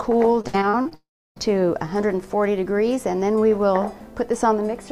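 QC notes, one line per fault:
0.41–0.93 s, repeated packet loss (robotic sound): six separate gaps, the longest 59 ms, each patched by extending the previous sound, so about 38% of the stretch is concealed and sounds choppy and robotic.
0.95–1.38 s, long network dropout: likely a network outage. Roughly 0.42 s of audio never arrives, and the hole is covered by continued sound that includes about 0.31 s of silence. Playback then resumes without the missing part.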